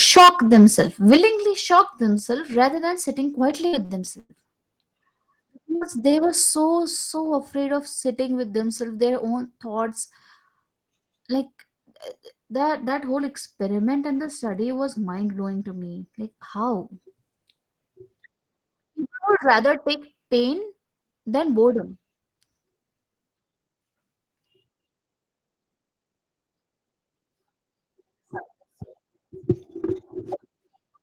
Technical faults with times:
0.06-0.81 microphone overload
0.17 microphone volume stepped down
1.12-1.17 microphone overload
1.17 microphone volume stepped down
3.67-4.32 repeated packet loss (robotic sound)
5.75-5.84 burst of packet loss
6.11-6.16 short stall from a late packet
11.16-11.53 jitter buffer speed-up
28.07-28.66 jitter buffer speed-up

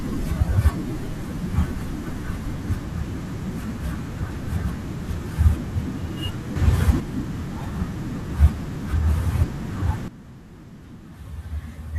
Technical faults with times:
6.56-7.00 sudden gain jump
10.08-11.99 sudden gain jump

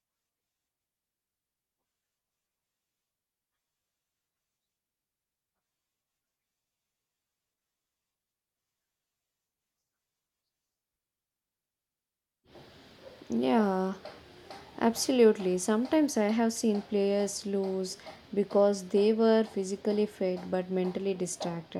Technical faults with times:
none

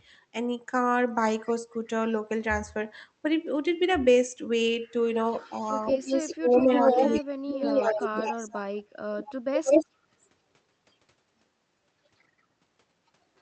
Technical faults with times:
1.46-1.51 echo leak
5.30-8.83 echo leak
6.27-8.63 speech suppressed in double talk
9.18-9.29 echo leak
9.64-9.86 echo leak
9.65-9.72 speech suppressed in double talk

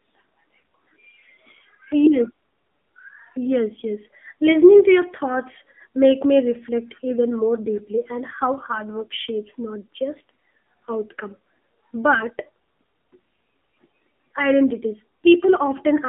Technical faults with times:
0.00-16.09 AMR narrowband mobile codec

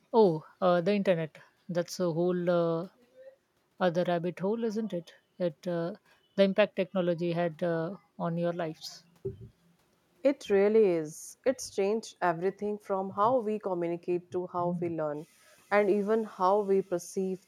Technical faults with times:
none

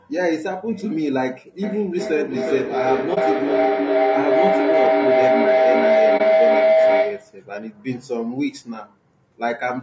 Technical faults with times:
0.00-9.82 low-delay AAC compression
1.63-7.47 feedback howl
3.14-3.18 AAC frame loss with muting
6.17-6.21 AAC frame loss with muting

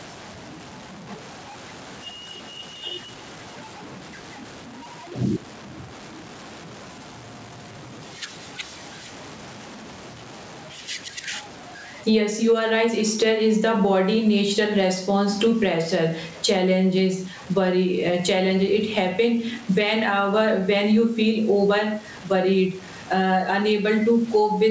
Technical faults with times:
0.00-24.71 low bit depth without dither
0.00-24.71 gain pumping

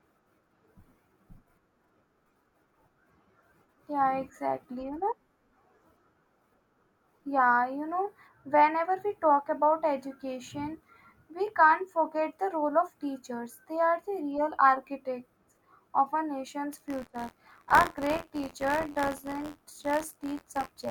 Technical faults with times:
16.72-20.91 buffer tearing

